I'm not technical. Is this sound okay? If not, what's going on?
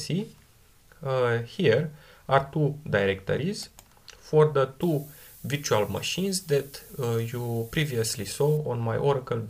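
No. From about 4.81 to 8.57 seconds the sound turns thin and overly bright, with hissy, sharp high tones pushed forward and little body underneath. This is pre-emphasis left on. The treble in that stretch was deliberately boosted, in the way FM radio does before sending, so that a matching treble cut on playback would restore the balance. That cut was never applied, so the extra brightness stays in.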